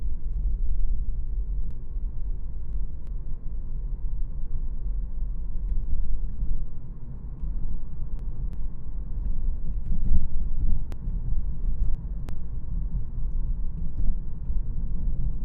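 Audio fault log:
1.71–3.07 s, 7.17–8.53 s and 10.92–12.29 s, chunks out of order: in each span a block of about 0.34 s was delivered late and played three blocks after its proper place, so the sound that belonged first arrives last. Nothing is missing, but the sequence jumps backward and forward, giving a brief jumbled stretch of about 1.4 s with three abrupt joins where unrelated blocks butt together.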